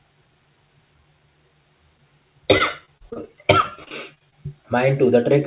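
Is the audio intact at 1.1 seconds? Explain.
Yes, the speech at 1.1 seconds is intact, with no dropout, glitch or distortion there, only the narrow call-path band that leaves nothing above 4 kHz.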